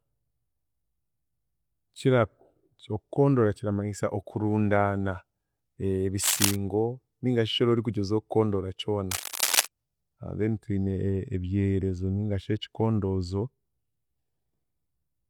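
Bursts of dense, uneven scratching cut across the speech from 6.22 to 6.56 s and again from 9.11 to 9.66 s, roughly as loud as the voice itself. This cable scratch noise is likely a worn cable or connector being moved, its contact resistance fluctuating rapidly.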